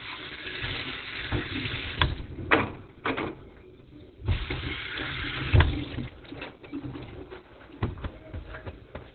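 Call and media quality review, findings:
Opus compression, throughout (0 to 9 s). Sound muffled, hoarse; heavy damage. Likely Opus in SILK speech mode at narrowband, which fits a very low bitrate near 12 kbps: encoder discards upper bands, coarsely models the rest. Spectrogram: hard ceiling, nothing above 4.2 kHz, blank band over it; rough, smeared energy below. Waveform: no distinct sign.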